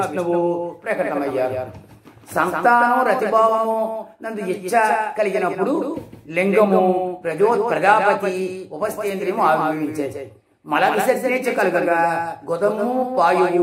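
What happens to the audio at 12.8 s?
At 12.8 s a doubled audio track is present, likely from a second, slower capture path, so a copy around 5 dB quieter trails about 150 ms behind throughout.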